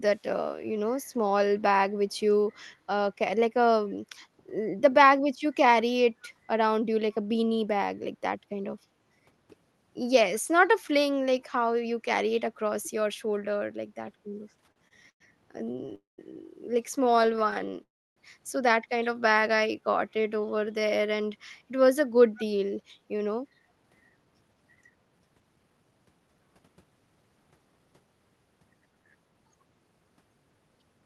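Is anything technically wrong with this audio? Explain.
Yes. The speech carries several network and playback faults, heard through a call path band-limited near 12 kHz.

Echo leak, at 2.53 to 2.63 s and 22.36 to 22.45 s. A delayed copy of the speech, 195 ms late, returns. The likely cause is a far-end loudspeaker whose echo canceller let some pickup through. The first is about 40 dB down. The second is about 20 dB down.

Repeated stalls (stutter), at 14.65 to 15.22 s, 15.58 to 15.93 s and 17.04 to 17.77 s. Packets kept arriving late, so the jitter buffer kept running dry. The receiver stretched the last sound each time. The first run has six gaps, up to 102 ms. The second has six short gaps. The third has fourteen very brief ones. The speech drags and stutters, but nothing is lost.

Call audio freeze, at 15.95 to 16.20 s and 17.83 to 18.18 s. Delayed packets likely emptied the buffer. The sound fades out, leaving 170 ms and then 300 ms of silence. 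Speech resumes where it stopped, with 230 ms and 332 ms of pause inserted.

Jitter buffer slow-down, at 19.33 to 21.27 s. To rebuild its reserve, the receiver repeated tiny pitch-period slices. Playback runs at 88% speed, adding 239 ms. Pitch stays unchanged, and sounds are drawn out.

Jitter buffer speed-up, at 22.76 to 28.16 s. Too much audio had queued up, so short pitch-period pieces were cut repeatedly, about 0.7 s in all. The speech runs at 113% speed, sounding hurried at normal pitch.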